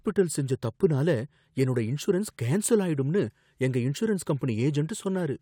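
No faults turn up anywhere in this recording, so there's nothing here to point to or explain.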